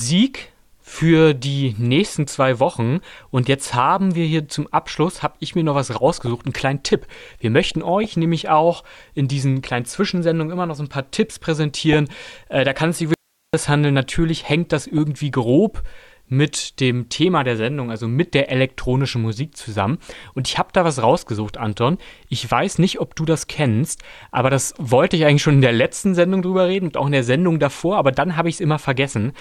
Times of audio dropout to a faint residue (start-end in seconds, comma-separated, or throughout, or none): 13.14-13.54